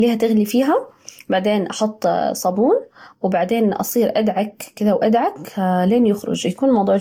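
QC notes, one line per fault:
throughout: generation loss. Swirly, hollow, smeared speech with blurred attacks and nothing above 19.2 kHz, likely from around five Vorbis-style re-encodes near 70 kbit/s compounding quantisation noise.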